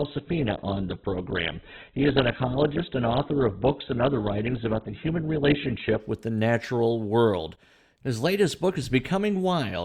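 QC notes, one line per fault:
0.0–6.0 s, adaptive stream starting at a low bitrate: the player began on a cheap version of the stream for a fast start, so the speech has nothing above 4.4 kHz and a smeared, watery codec texture that fits a very low bitrate near 8 kbit/s. At 6.0 s it switches to a better version, likely around 64 kbit/s, and the treble returns with no gap. On a spectrogram, a flat ceiling at 4.4 kHz ends abruptly at 6.0 s, while the waveform stays continuous.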